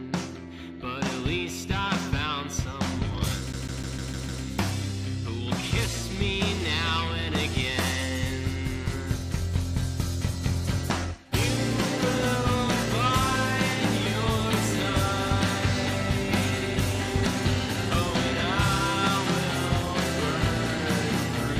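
From 3.52 to 4.44 s the audio is CD stuck on one turn: a 0.15 s fragment repeats six times, each jump briefly muted, evenly timed unlike erratic digital dropouts.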